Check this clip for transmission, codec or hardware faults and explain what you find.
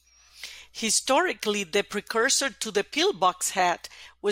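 Nothing in the speech recording points to a transmission, codec or hardware fault.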